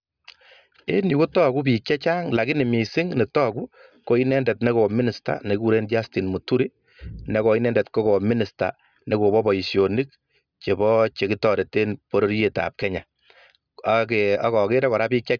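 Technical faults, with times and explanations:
No technical faults can be heard in this speech recording. Nothing in it needs a time or an explanation.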